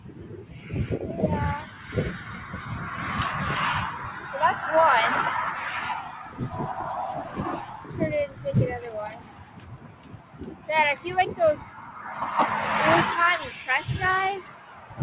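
The sound pumps and thins throughout, with held tones and tails swinging in level by around 15 dB, because a noise suppressor built for speech is running on music or sounds and treating sustained content as noise. Sustained passages sink further where the sound is cut by the noise suppressor, at 0.00–0.73 s (about 10 dB), 1.64–2.61 s (about 6 dB), 6.23–6.40 s (about 8 dB), 7.25–8.45 s (about 9 dB), 9.10–11.05 s (about 10 dB), 11.61–11.97 s (about 6 dB) and 14.42–14.99 s (about 9 dB). The band stops at 4 kHz, which fits a G.711 A-law call path.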